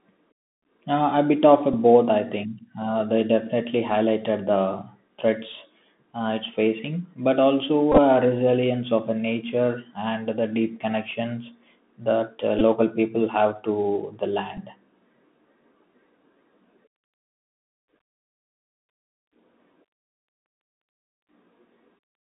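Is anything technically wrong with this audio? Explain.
Yes, two things. The whole 22-second clip is speech squeezed through a Bluetooth CVSD headset codec, and there are a few spots of Bluetooth headset packet repetition.

CVSD runs throughout. The line only carries about 150 Hz to 3.6 kHz, so it sounds boxy and phone-like. Because it codes each sample as a single up-or-down step, fast loud high content outruns the step size, which gives those scratchy, gritty sibilants and the grainy hiss underneath.

The packet repeats are at 1.73 s, 7.92 to 7.99 s, 12.59 to 12.62 s, and 14.57 s. When a link packet drops, the chip replays the previous one. At 1.73 and 14.57 s that's only about 7.5 ms lost, two packets each. At 12.59 s it's about 15 ms and gives a brief buzzy stutter. Around 7.92 s about 37.5 ms of loss is scattered across 60 ms, with the longest run around 15 ms, so you hear a short rough burst of buzz near 267 Hz. 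That buzz comes from the 3.75 ms packet period repeating.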